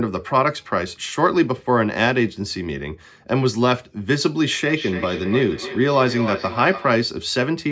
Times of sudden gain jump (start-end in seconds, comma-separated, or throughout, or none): none